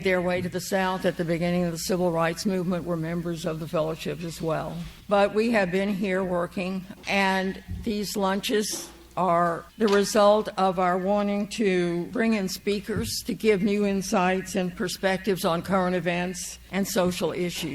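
At 8.54 to 8.56 s a short burst of misplaced energy interrupts the audio. It is a corrupt frame decoded: one damaged compressed frame played anyway, peaking around -20 dBFS.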